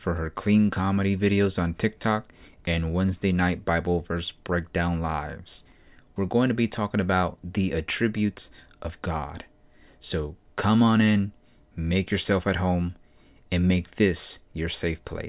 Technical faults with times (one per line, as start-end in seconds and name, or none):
none